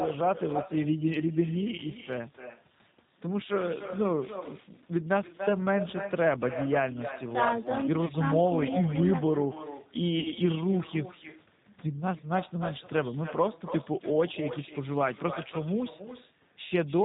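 Throughout, every phrase is trailed by a quieter, thinner copy of itself about 11 dB down, arriving roughly a third of a second later. This is echo with no canceller: the far end's loudspeaker sound leaks into its microphone and returns across the network unremoved.

The whole clip also sounds narrow, with nothing above 4 kHz, and the speech has a slightly rough, synthetic edge. That points to the G.729 codec. The audible damage fits an 8 kbit/s stream, where the speech is rebuilt from a filter model and a few pulses per frame.

From 8.06 to 8.12 s the sound briefly smears into a buzzy tone or coloured noise that fades, and stays weak for a moment afterwards. A longer version of the same smear follows from 10.20 to 10.32 s. Both are VoIP packet loss concealed by the speech codec. Lost packets, about 30 ms and 50 ms of audio, were filled by extrapolating from the last good frame.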